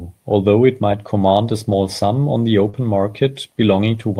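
At 1.71 to 1.73 s, just after "it might command a" and before "sum on the", one lost packet was rebuilt from error correction. The next packet carried a low-bitrate copy, so 20 ms plays back rougher and noisier but with no gap or smear.

At 2.69 to 2.75 s, after "sum on the", a short concealed packet loss fills about 40 ms by extending the preceding sound, which gives a brief smear or wobble rather than coarse grain. Its final 20 ms, from 2.73 s, is again rebuilt from error correction before the real audio resumes.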